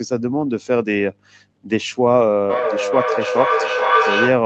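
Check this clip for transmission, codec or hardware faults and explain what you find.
One fault is present: feedback echo between two devices. From 2.49 s to the end, the speech returns roughly every 0.4 s, thinner each pass. A second device plays the audio into a nearby microphone, outside its echo canceller's reach. Repeats reach about 0 dB relative to the speech.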